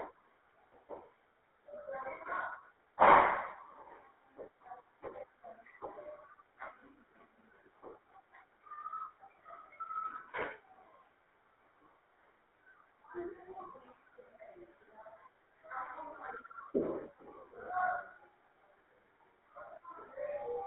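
From start to finish the speech carries GSM full-rate codec damage. The band runs only from about 300 Hz to 3.6 kHz, and inside it the voice has a plainly audible buzzy, gravelly roughness, consistent with a 13 kbps full-rate coder rebuilding the vocal tract from a sparse pulse excitation. Unlike simple telephone band-limiting, which only dulls the sound, this grit sits in the voice itself and never lets up.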